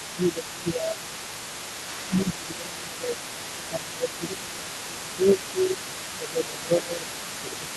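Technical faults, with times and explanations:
Throughout, other side's voice leaking through: a second voice sits underneath the whole clip, roughly 15 dB below the main talker. It's most likely loudspeaker playback on the talker's end getting back into the mic because the echo canceller didn't fully strip it out.
0.1–1.11 s, 2.05–2.14 s, 2.31–3.37 s, 3.54–5.0 s, 5.16–7.76 s, speech suppressed in double talk: the main voice keeps dipping, by roughly 10 to 15 dB at worst, while that other voice is active. The likely cause is the canceller failing to separate the two and pulling everything down together.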